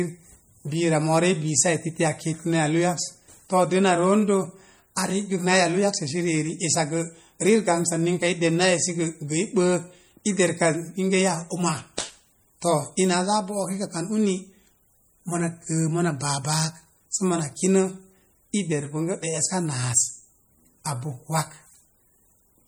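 Speech, with plainly audible MP3 compression throughout. The sound is watery and swirly as weak frequency lines drop in and out between frames. Nothing sits above about 21 kHz. The damage likely comes from a low bitrate, fitting roughly 48 kbps.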